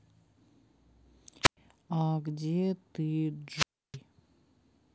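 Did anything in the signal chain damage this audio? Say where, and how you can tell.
Yes, a wireless microphone squelch dropout on the analogue radio link: hiss swells, then silence for 0.11 s at 1.43–1.57 s and 0.31 s at 3.55–3.97 s. The hiss before each hole rules out network packet loss.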